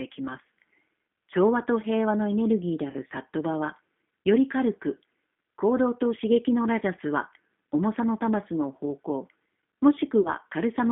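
Speech squeezed through a G.729 codec at 8 kbit/s, so it's band-limited to roughly 200 Hz to 3.5 kHz and has that plainly rough, synthetic edge from the pulse-based rebuild. There's VoIP packet loss concealed by the speech codec twice: 2.90–2.96 s between "ギーであ" and "サットバ", and 10.21–10.30 s after "の方向も". Each gap turns into a fading, stretched-out smear, and about 40 ms went missing each time, which fits two lost packets.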